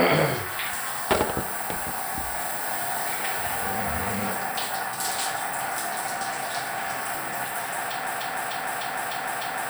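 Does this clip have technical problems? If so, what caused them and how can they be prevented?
Yes, a broken-record loop from 8.07 s to the end: a 0.30 s fragment repeats five times, likely a stalled player resending its last buffer. Watchdog the stream and restart on stalls.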